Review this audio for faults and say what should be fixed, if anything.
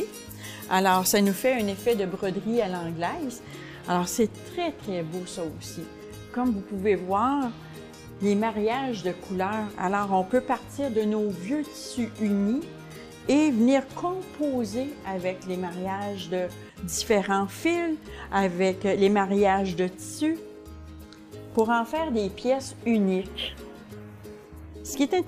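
Pre-emphasis left on, from 0.0 to 2.0 s: the treble lift of an FM 50 µs curve was applied but never reversed by the matching de-emphasis. At 10 kHz the highs sit about 11 dB above 1 kHz, making the sound thin, bright and sibilant.

To prevent it, pair every 50 µs pre-emphasis stage with its de-emphasis filter on the receiving or playback side, and confirm the tonal balance right from the start of each file.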